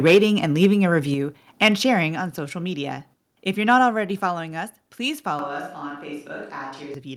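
From 0.06 to 0.18 s the loudest peaks flatten into a harsh, crackling edge. This is microphone overload, most likely an input set so high that the converter ran out of headroom about 5 dB above its limit, shearing the waveform tops. It recurs more briefly at 0.62 to 0.66 s (about 2 dB over) and at 1.62 to 1.68 s (about 4 dB over), just before "sharing on social media". Unlike a packet-loss tick, the distortion follows the loudness of the sound and lasts as long as each peak, rather than being a single short blip.

Close behind the first overload, at 0.15 s, the whole signal, room tone included, drops by about 2 dB in one clean step. The microphone volume stepped down, likely with call software reacting to the clipping by lowering the device gain. Further drops follow at 1.14 s (about 5 dB), at 2.16 s just before "on social media" (about 4 dB), and at 4.2 s (about 4 dB). Only the level changes. 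The tone stays the same, which sets these steps apart from a microphone change.

Right after "us please", at 5.39 s, the sound suddenly turns roomy and hollow and loses bass, while staying at roughly the same level. A faint room noise appears, roughly 35 dB below the speech. This is a switch to a distant microphone, likely with the close one dropping out. The change is abrupt, both going in and coming back at 6.94 s, and the tone changes rather than the level, which is what separates it from a gain step.

Inside that stretch, at 5.89 s, comes a short concealed packet loss. About 10 ms of audio never arrived, and the receiver filled roughly 7 ms by extending the preceding sound before blending back into the real signal. It comes across as a tiny smear or wobble. It is too brief and too isolated to be clipping, and it does not track loudness.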